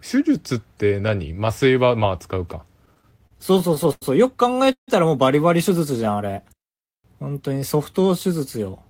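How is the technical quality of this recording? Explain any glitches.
The recording has three network-related glitches in the speech. Each one stretches or interrupts the sound, but none of them drops any content.

Repeated stalls (stutter) run from 2.85 to 4.04 s. Packets kept arriving late, and the jitter buffer ran dry eleven times. Each time, the receiver stretched the last sound until more data came in. About 220 ms was filled this way. The longest gap is about 90 ms. That is roughly a fifth of the span. The speech drags and catches, and nothing is lost.

A call audio freeze occurs from 4.72 to 4.90 s. The sound stops, and the last fragment carries on briefly before fading into about 110 ms of silence. Then the speech resumes exactly where it left off. The likely cause is packets held up in transit, which emptied the buffer for about 150 ms. That pause adds a gap and pushes everything after it later by the same amount.

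A jitter buffer slow-down follows from 5.90 to 7.60 s. The buffer needed a reserve, so the receiver repeated single pitch periods and small slices of pauses. This added about 160 ms. The speech plays at about 91 percent speed while the pitch stays the same. Sounds come out drawn out.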